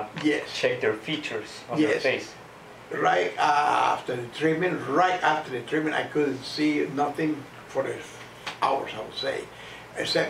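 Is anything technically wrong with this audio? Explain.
No, nothing technically wrong is audible anywhere in this clip.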